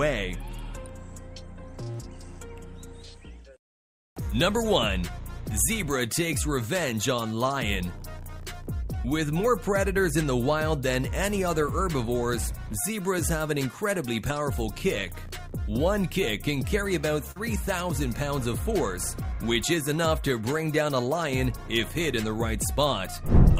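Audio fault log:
17.31–17.38 s, short concealed packet loss: about 40 ms of audio failed to reach the decoder in time, and the receiver covered the gap by extending the preceding sound for roughly 41 ms, carrying its pitch forward where there was one or substituting shaped noise where there was not, before blending back into the real signal. The result is a brief smear or wobble in place of the lost audio.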